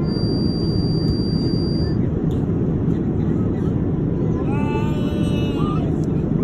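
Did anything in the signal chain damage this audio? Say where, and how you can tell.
Yes. From 0 to 2.0 s a thin, steady feedback whistle at 4.7 kHz sits roughly 15 dB under the sound, swelling and fading slowly in level. This points to the analogue acoustic path, likely a loudspeaker-to-microphone loop held just at the edge of feedback, sustaining one tone without running away.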